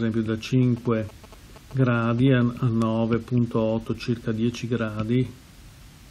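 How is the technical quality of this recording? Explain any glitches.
The recording has one clear glitch: GSM signalling bursts from about 0.62 s to 2.29 s. A nearby 2G phone exchanging short control messages with the network sends radio bursts at about 217 Hz, and the audio circuitry rectifies them into sound. The result is a galloping dit-dit-dit of short buzzes, around 20 dB below the main sound. A spectrogram shows stacked harmonic lines spaced 217 Hz apart, switching on and off in clusters. The waveform shows dense, regularly spaced spikes.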